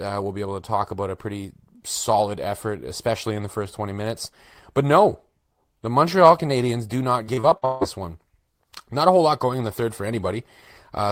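From 7.23 to 7.83 s the speech breaks up with repeated packet loss, giving a robotic sound. Data kept arriving late or not at all, and each of six holes was patched by stretching the preceding sound. About 336 ms is filled this way, with 340 ms of real audio gone and the longest gap 158 ms, so the voice turns choppy, with pieces missing. A spectrogram shows smeared, repeated frames and abrupt edges. The waveform shows flattened, looping segments.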